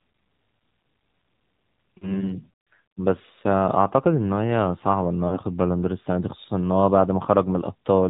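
Throughout, the speech carries AMR narrowband mobile codec damage. Nothing above 4 kHz survives, and the pulse-driven vocal tract model leaves the voice plainly buzzy and synthetic, which fits a low AMR-NB mode around 7.4 kbps.

From 1.98 to 2.19 s and again from 5.28 to 5.39 s, lost AMR speech frames occur. Each gap sounds like roughly 40 ms missing, which points to two consecutive frames. The decoder repeats the last pitch and vocal tract settings at falling gain, producing a short smeared warble and dip before the voice returns rough.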